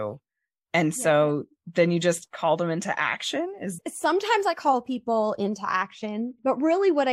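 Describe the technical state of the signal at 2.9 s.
At 2.9 s the speech signal is intact, with no dropout, clipping, glitch or other technical fault present at that moment.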